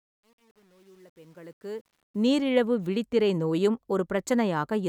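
From 0.0 to 2.31 s the speech fades in, but the quiet portion carries truncation distortion on a fade. The gain stage drops low-order bits without dither, which fits a 9-bit path, so near the bottom of the fade the waveform collapses into coarse square steps. It is worst from 0.0 to 1.79 s, where the sound turns gritty, clearing by "விழித்திரை நோயும்".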